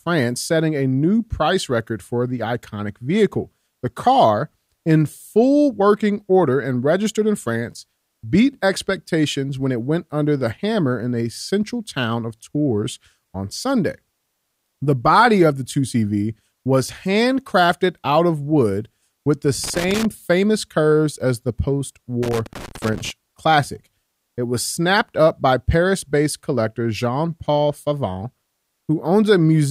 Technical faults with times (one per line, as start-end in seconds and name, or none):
19.64-20.05 loose connector crackle
22.23-23.10 loose connector crackle